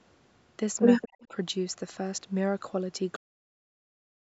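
From 1.01 to 1.07 s a faint delayed copy of the speech sits under the live signal, trailing it by 183 ms and roughly 20 dB down. This is an echo leak, likely caused by one side playing the call on a loudspeaker and its echo canceller failing to remove all of it, so that part of the audio was returned. The fragment is short and scrappy.

Starting at 1.06 s and running to 1.34 s, the speech dips and partly drops out, reaching a deepest attenuation of around 35 dB, with about a fifth of a second affected in total. This is speech suppressed in double talk. It is likely the canceller's response to both sides talking at once: unable to separate the near talker from the returning echo, it turned the whole signal down. The dips give the speech a broken, gated quality.

Inside that stretch, at 1.23 to 1.27 s, a second, weaker echo leak appears with the same 183 ms delay, now roughly 35 dB below the speech.

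At 3.16 s the audio stops abruptly mid-sound and falls to digital silence with no decay. This is a cut-off end: the final buffers were never written or played out, so the tail of the sound is missing. Throughout the clip, the band stops at 8 kHz, consistent with call microphone processing.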